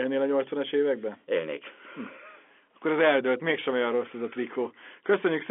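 No technical faults can be heard anywhere in this speech recording. It has passed through ordinary G.711 telephone coding, so the sound is confined to the phone band, with nothing above roughly 3.7 kHz, and only a faint trace of the coding itself.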